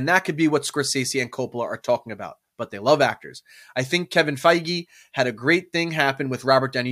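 No technical faults can be heard anywhere in the speech.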